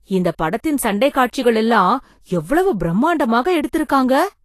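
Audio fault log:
Throughout, Vorbis compression: the speech has no content above 14.2 kHz and plainly audible codec damage, heard as hiss and graininess in the upper range, roughened tonal parts and softened consonant attacks. The likely cause is low-quality Vorbis encoding, consistent with a bitrate near 37 kbps. The encoder cuts the band at 14.2 kHz and quantises the remaining treble so coarsely that fine detail is replaced by noise of similar energy.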